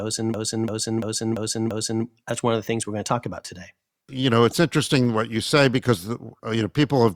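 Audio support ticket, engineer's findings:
System hang loop, 0.34–2.05 s: one 341 ms segment repeats five times at 2.93 Hz, like a skipping record. Fits a 16384-sample ring buffer replaying while the driver froze; no audio lost before "that's one of the".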